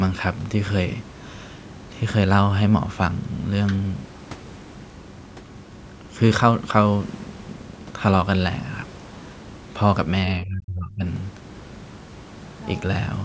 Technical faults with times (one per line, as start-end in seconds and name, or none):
10.41-11.04 speech suppressed in double talk